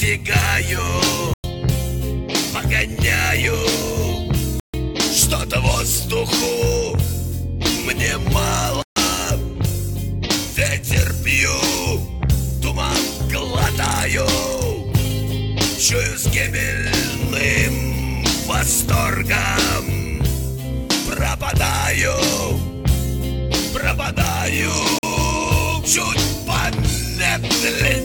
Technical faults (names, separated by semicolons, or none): block of digital silence; digital radio blending to analogue